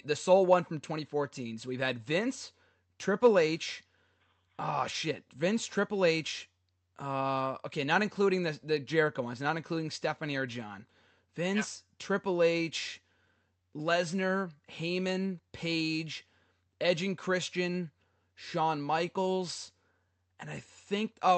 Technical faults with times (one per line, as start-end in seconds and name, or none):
none